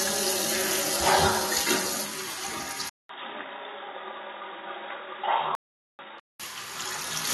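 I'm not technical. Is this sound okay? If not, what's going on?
No. AAC compression affects the whole clip: the sound is dull and smeared. This likely comes from saving it in a space-saving format that discards detail it judges you won't miss, leaving a fizzy, warbly texture.

An input switched to a poorer device at 2.89 s: after a 0.2 s gap, the sound turns muffled and boxy. It is noticeably quieter and has a faint new background noise. The recording likely jumped to a lower-quality microphone until 6.40 s.

A playback stall runs from 5.55 s to 5.99 s. The audio cuts out for about 0.44 s, then continues. This likely happened because the player ran short of data, or was briefly held up, and output nothing until it caught up.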